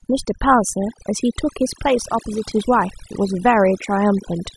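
From start to finish the speech carries overdone noise removal: a noise reduction stage was pushed so hard that individual frequency bins are clamped down whenever their level sits near the estimated noise floor. The gaps between phrases collapse to an unnatural hush dotted with chirping musical noise, and softer speech detail is stripped away. Unlike a simple gate, which cuts the whole signal at once, this suppression works band by band.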